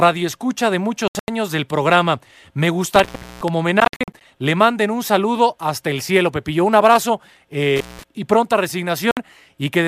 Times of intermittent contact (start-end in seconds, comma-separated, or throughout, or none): 2.96-3.48, 7.76-8.03